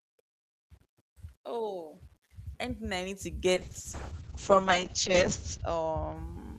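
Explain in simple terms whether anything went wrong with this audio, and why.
Low bit depth without dither, throughout: a faint grainy roughness follows the speech, likely from rounding the sound to too few levels, about 10 bits, without smoothing noise.

Call bitrate drop, from 3.54 to 6.21 s: the call suddenly had far less data to work with, so the speech turns rough and muffled, losing its crisp top end above 8 kHz.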